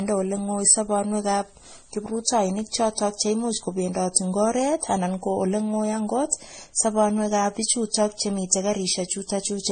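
The speech carries transcoding between lossy codecs throughout, likely from Vorbis, MP3 and AAC passes. Nothing remains above about 9.1 kHz. Layered artefacts from the different codecs stack together.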